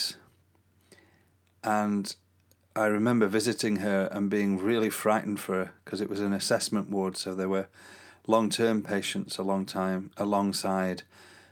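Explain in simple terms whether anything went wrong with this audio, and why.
Nothing went wrong here.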